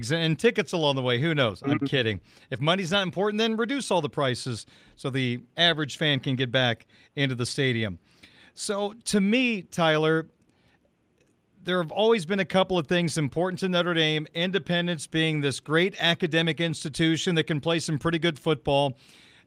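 Listening through the speech, nothing stood out as a technical fault at any point.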